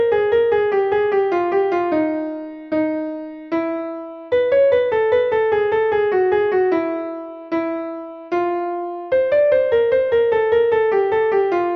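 Nothing in the audio goes wrong at any point, so there's no technical fault to point to anywhere along the way.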